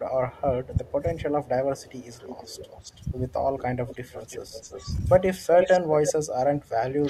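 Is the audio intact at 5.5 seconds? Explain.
No. From 5.45 to 5.49 s the speech briefly dips, falling by around 10 dB for roughly 40 ms before recovering. This is likely speech suppressed in double talk: with both sides talking at once, the echo canceller could not tell this talker apart from the returning loudspeaker signal, so it pulled down everything it heard, including the wanted speech.

Just after, from 5.57 to 6.12 s, a delayed copy of the speech sounds underneath, trailing the original by 327 ms and only slightly quieter than it. This is likely an echo leak: on a loudspeaker end of the call, the echo canceller failed to remove all of what its microphone captured, and the residue was sent back as an audible repeat.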